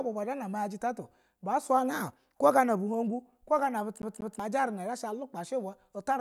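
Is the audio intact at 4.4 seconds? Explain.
No, the disc's laser jumps back one track each turn, a CD stuck on one turn from 4.02 to 4.40 s, so a 0.19 s slice of speech plays twice with brief mutes.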